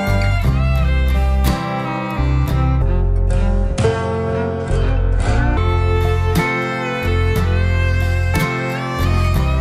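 Section at the wrong speed, 2.82 to 5.57 s: the audio slows to 0.68x and drops about seven semitones, likely from playback against a mismatched clock.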